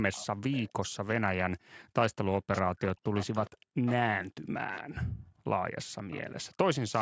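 Echo leak at 0.12–0.71, 2.52–3.51 and 3.86–3.95 s. The speech repeats 411 ms late, loudest in the middle stretch. An echo canceller likely missed loudspeaker pickup.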